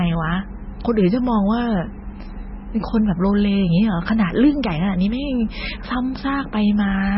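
Throughout, the speech has no treble above 5.6 kHz and sounds watery and swirly, with chirping sibilants and smeared attacks. This heavy damage likely comes from MP3 compression at a very low bitrate.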